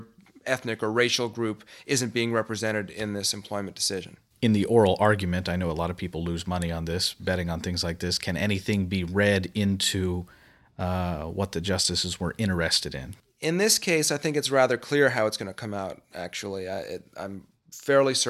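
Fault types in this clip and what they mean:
No technical faults can be heard in this speech recording. There is nothing to list, as no problem turns up at any point in the audio.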